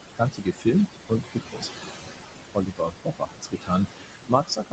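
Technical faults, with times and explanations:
Throughout: noise suppressor artifacts. The room noise, about 9 dB under the speech, gets pushed down by about 20 dB between phrases and returns beneath them.
0.16–0.74 s, 0.93–1.89 s, 2.54 s to the end: speech cut by the noise suppressor. The suppressor treats parts of the speech as noise and lowers them by up to about 19, 20 and 22 dB. Across roughly 0.4 s and 0.5 s in the first two stretches, the sound goes faint and swallowed with the background, rather than merely the gaps going quiet.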